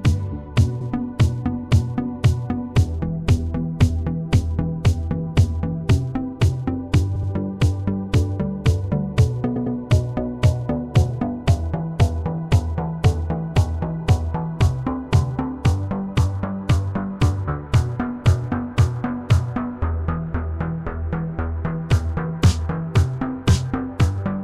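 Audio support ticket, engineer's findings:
Repeated frames, 0.80–0.90 s: 0.10 s block played twice. Stutter. Fits four compressed frames of about 26 ms each, duplicated in writing or transmission. 7.15–7.30 s: 78 ms block played three times, 0.16 s added. 9.55–9.76 s: 0.10 s block played three times, 0.21 s added. On the spectrogram, identical adjacent patches. Waveform shows copied segments and an added duration of about 0.47 s.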